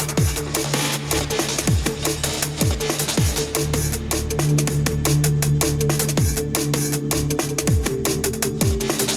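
Input gain set far too high, with a fast limiter or compressor likely clamping it on each loud sound, causes gain pumping throughout. The gain swings by around 5 dB, leaving the level squashed and flattened.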